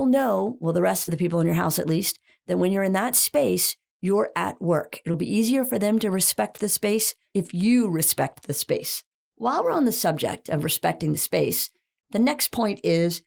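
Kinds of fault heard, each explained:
Short concealed packet loss, at 1.03 to 1.09 s and 5.11 to 5.15 s: stretches of the call arrived too late for the decoder, and the receiver covered each gap by extending the preceding sound before easing back into real audio. About 40 ms is papered over after "know well the rest", heard as a brief smear before "the people in your", and a shorter 20 ms patch follows "space you're at work".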